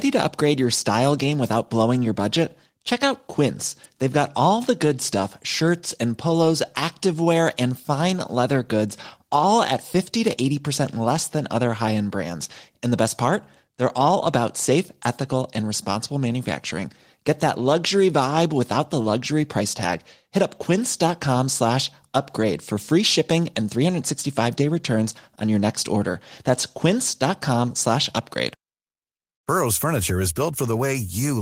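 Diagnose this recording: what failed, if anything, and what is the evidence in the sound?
Nothing seems to have gone wrong anywhere along the chain in this speech recording; I can't hear anything to diagnose.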